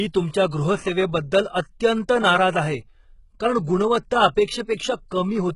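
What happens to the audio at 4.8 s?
Just after "कारण गुणवत्ता", from 4.76 to 4.79 s, there is pre-echo: a 33 ms smear of codec noise spills ahead of the attack, heard as a short hiss before a softened onset, visible as a noise haze before the transient. Throughout, the treble sounds gritty and lispy, likely from HE-AAC compression at a very low bitrate, around 12 kbps. The spectrogram shows a coarse, copied-looking upper band and nothing above 11.1 kHz.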